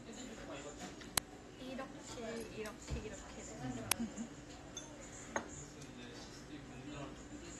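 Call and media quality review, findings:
AAC compression throughout: dull, smeared texture with warbling on sustained sound; spectrogram shows a hard ceiling near 12.1 kHz and patchy bands. Likely low-bitrate AAC-LC, around 32 kbps.

Uninitialised buffer at 1.18 s and 3.92 s: brief loud digital noise bursts, seen as short waveform spikes. Lengths fit 64- and 128-sample blocks read before being written.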